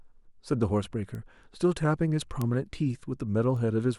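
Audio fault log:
1.15 s, 2.42 s, 3.57 s: bit error spike, three times across the speech. Each is a single corrupted sample, where one flipped bit throws the value off by a power of two before it snaps straight back. The result is a sharp tick unrelated to the speech, peaking at about -24, -12 and -30 dBFS, so the middle one is loudest. On the waveform each shows as a lone one-sample needle. On a spectrogram each is a thin vertical line spanning all frequencies.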